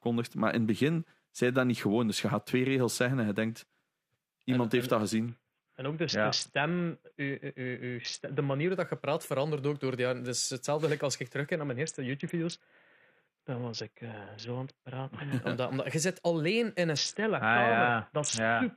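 Speech with three Bluetooth SBC bit pool drops, at 5.28–8.72 s, 11.55–15.32 s and 16.97 s to the end. In each, the treble dulls and gritty noise rises, consistent with the bit pool falling from 28 to about 5 (near 54 kbps) on a congested link.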